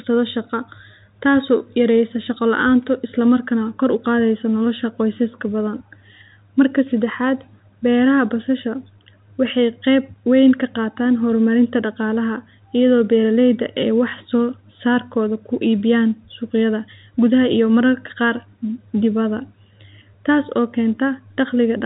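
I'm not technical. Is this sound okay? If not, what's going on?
Yes, nothing stood out as a problem when listening to this recording.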